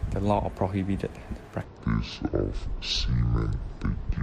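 From 1.64 s to 4.23 s the speech turns deep and dragging, a section at the wrong speed running at 0.571x, likely played against the wrong clock.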